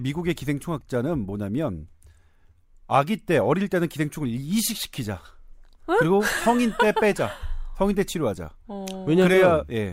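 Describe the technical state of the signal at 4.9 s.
At 4.9 s the speech signal is intact, with no fault present at that moment.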